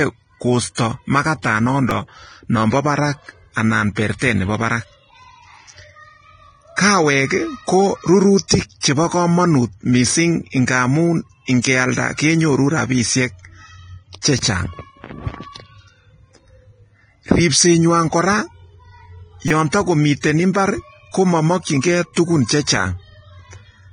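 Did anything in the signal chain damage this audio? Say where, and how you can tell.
Yes. Nothing above 9.7 kHz survives, and the treble is hissy and grainy throughout. That's likely heavy, low-bitrate Vorbis compression at the codec stage, with fine detail quantised into noise.

At the driver or buffer stage there's a repeated buffer: short buzzy stutters at 1.90–1.91 s, 14.39 s and 19.48–19.51 s. Each is a 5.8 ms chunk replayed, which fits a 256-sample buffer.

Pre-echo, also from the codec, puts short hiss ahead of attacks at 8.37–8.39 s and 8.48–8.51 s just before "chebo komonut mising", then at 11.62–11.64 s and 21.81–21.83 s. The spreads of 20–27 ms are block noise leaking ahead of each attack.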